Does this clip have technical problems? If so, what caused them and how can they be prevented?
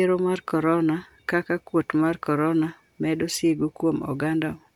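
No, the signal shows no technical problems that would need a cause explained or a fix.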